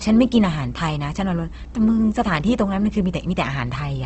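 A steady mains hum runs under the speech from start to finish. It sits at 60 Hz, roughly 15 dB below the speech. A ground loop or nearby transformer has leaked the power line into the signal. It sounds like a constant low drone.

The speech is also grainy and rough throughout, with nothing above 8.2 kHz. Opus compression is the likely cause. The limited wideband band and the coarse, noisy texture point to a low bitrate, where the encoder fills starved bands with noise instead of detail.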